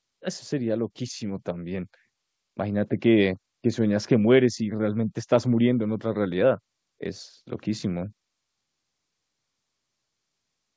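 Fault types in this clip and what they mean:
Automatic gain rising, 0.50 to 1.94 s: the gain control judged the incoming speech too quiet and pushed its amplification up step by step, so the voice and the background noise swell together by about 5 dB across roughly a second and a half rather than jumping at once. The call codec's bandwidth limit, with nothing above 8 kHz as a G.722 wideband path would give, stays in place while the level climbs.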